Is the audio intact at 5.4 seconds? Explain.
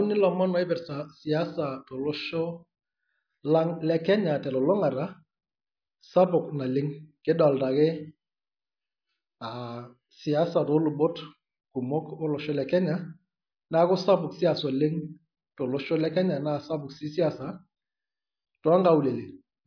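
Yes, at 5.4 seconds the speech runs intact, with no dropout, click, distortion or other fault at that moment.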